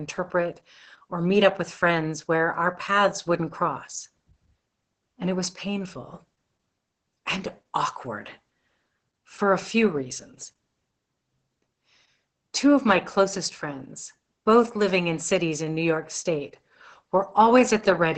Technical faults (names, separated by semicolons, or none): Opus voice compression